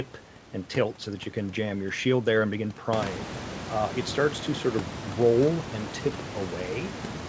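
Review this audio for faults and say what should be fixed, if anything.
No faults; nothing needs fixing.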